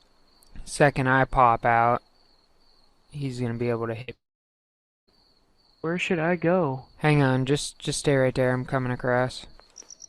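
At 4.01 s a burst of packet loss leaves about 60 ms missing; the receiver stretches the last sound briefly, fading it before playback resumes further on. From 4.14 to 5.09 s the sound dies away into roughly 0.87 s of silence, likely a long network dropout, returning with nearly a second skipped.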